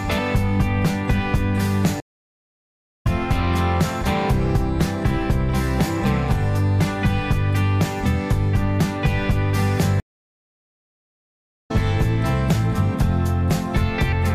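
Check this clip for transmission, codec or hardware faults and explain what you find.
Two stream reconnects are audible, one at 2.00 to 3.07 s and another at 10.00 to 11.71 s. In each, the connection dropped, the player went quiet, then reconnected and started a new decoder partway through the stream. The first gap lasts 1.05 s and the second about 1.7 s. After each silence the audio does not pick up where it stopped but jumps ahead by about a second, skipping that stretch of material.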